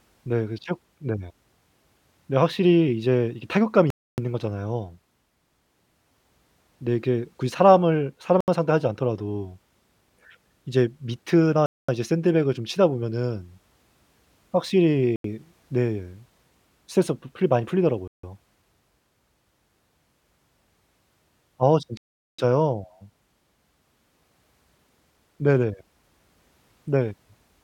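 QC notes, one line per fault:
3.90–4.18, 8.41–8.48, 11.66–11.89, 15.16–15.25, 18.08–18.23 and 21.97–22.39 s: Bluetooth stall. The speech drops to dead silence for 0.07 to 0.41 s, then resumes. Likely cause: radio interference delayed packets, the receiver's buffer emptied, and playback waited for retransmissions.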